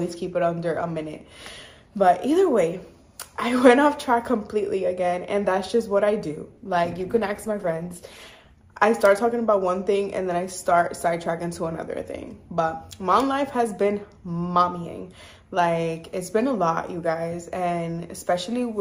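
At 6.57 s the quality drops suddenly, with no gap in the sound. This is an adaptive stream at a lower bitrate. The connection slowed, so the player switched to a leaner version of the stream for two seconds. Codec artefacts rise. The loss of detail points to a fall from roughly 64 to 16 kbit/s. At 8.57 s the fuller quality returns just as abruptly.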